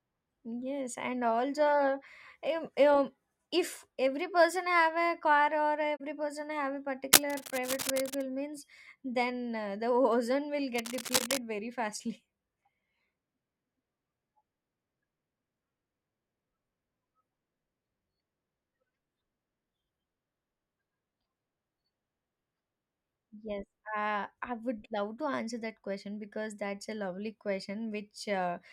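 Speech, with two kinds of fault. A corrupt frame concealed occurs at 5.96 to 6.01 s, and again at 11.18 to 11.21 s. The decoder caught damaged data and papered over it. Cable scratch noise adds dense, uneven rustling from 7.13 to 8.23 s, at about the level of the speech. It returns from 10.75 to 11.38 s, about 5 dB lower. A worn cable or connector being moved is the likely cause.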